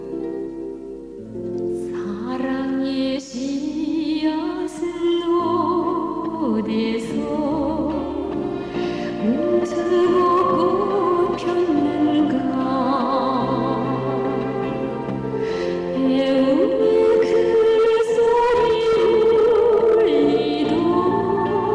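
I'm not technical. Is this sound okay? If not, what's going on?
Yes, this sound is okay. Nothing in it points to a technical problem.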